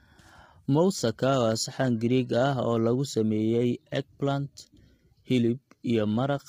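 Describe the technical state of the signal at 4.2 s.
At 4.2 s the speech sounds rough and grainy, with noise filling the gaps between harmonics and a thin, synthetic-sounding top end. That's there for the whole clip, likely low-delay AAC compression: short frames blur pitch detail, and heavy damage like this fits roughly 24 kbps.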